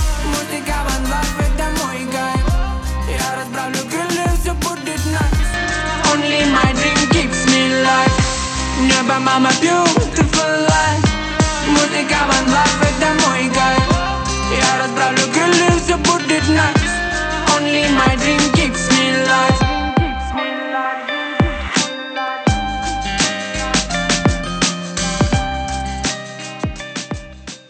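At 5.54 s the sound abruptly turns duller and boxier with no gap, nothing above about 8.4 kHz, a small level shift and a faint new background noise, lasting to the end. This is likely an input switched to a poorer device mid-recording.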